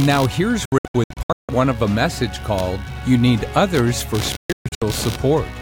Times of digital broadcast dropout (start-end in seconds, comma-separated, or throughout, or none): 0.65-1.49, 4.36-4.82